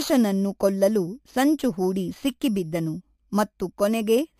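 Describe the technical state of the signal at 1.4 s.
At 1.4 s, as throughout, imaging from sample-and-hold upsampling: 11 kHz audio repeated up to 44.1 kHz unsmoothed mirrors the speech into 5.5–11 kHz, about 21 dB down, a fizz that tracks loudness and moves against pitch, unlike steady hiss.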